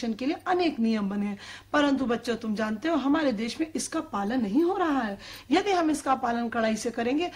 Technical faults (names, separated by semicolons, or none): none